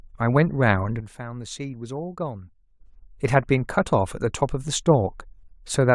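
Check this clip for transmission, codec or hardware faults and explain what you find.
A sudden gain jump runs from 1.00 s to 2.80 s, where the speech and its background noise drop together by about 12 dB in a single step and return just as abruptly at the end. The likely cause is a digital gain change applied between one sample and the next with no ramp, such as a level setting or bit shift switched in and then out. Both edges are instant step changes in loudness.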